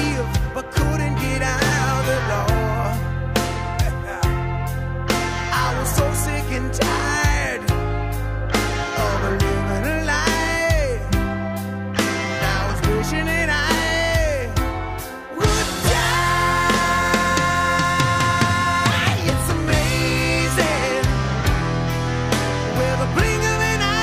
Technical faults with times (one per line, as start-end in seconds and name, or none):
none